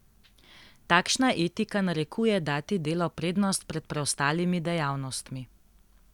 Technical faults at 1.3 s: none

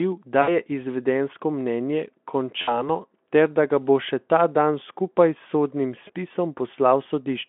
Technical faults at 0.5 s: VoIP packet loss concealed by the speech codec

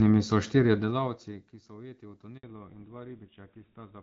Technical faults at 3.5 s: fallback to narrowband

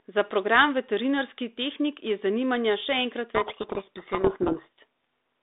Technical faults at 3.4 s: codec payload misread

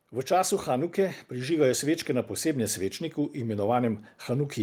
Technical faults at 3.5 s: automatic gain rising

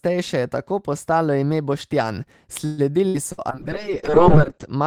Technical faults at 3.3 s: burst of packet loss

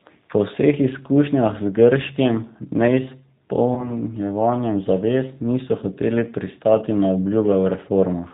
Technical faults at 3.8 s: G.729 codec; VoIP packet loss concealed by the speech codec

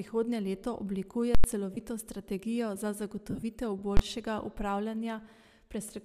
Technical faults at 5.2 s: none

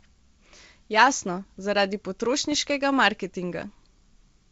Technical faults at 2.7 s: bit errors on an ADPCM link

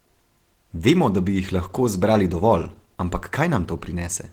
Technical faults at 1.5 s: Opus compression

